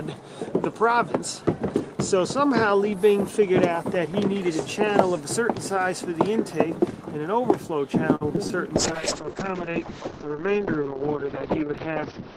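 From 8.15 to 8.52 s, repeated packet loss hits: four holes, the longest 53 ms, are patched by stretching the preceding sound, so roughly a quarter of that stretch is filler. The audio turns choppy and robotic, with short pieces missing.

At 8.77 s a call bitrate drop sets in and lasts to the end. The encoder is forced onto far fewer bits, consistent with a fall from about 32 to 7 kbps, and the bandwidth shrinks from 20 kHz to 6 kHz, leaving the sound muffled and rough.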